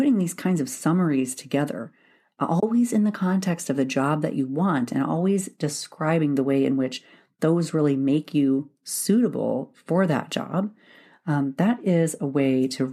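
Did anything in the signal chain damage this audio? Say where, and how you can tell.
Yes. At 2.60 to 2.63 s the speech drops into a soft-edged hole, fading out and in. This is AAC frame loss with muting in the network and codec stage. The decoder zeroed the missing spectrum, and overlapping windows smoothed the edges. The 30 ms gap fits three lost 10 ms frames, likely from a low-delay AAC stream.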